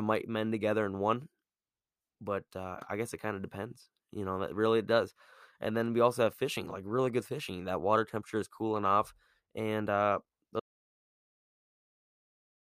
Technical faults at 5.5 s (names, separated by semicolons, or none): none